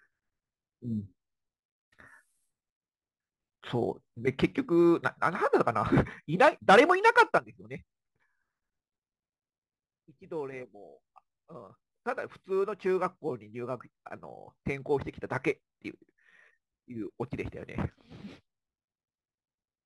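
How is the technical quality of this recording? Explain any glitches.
The recording has one technical fault, present for the whole clip. Crude rate conversion runs throughout: samples were picked by nearest position with no filtering, which fits a 48 kHz to 44.1 kHz change. The resulting aliasing tones sit roughly 30 dB below the speech, heard as a gritty, inharmonic fizz riding on loud and bright syllables.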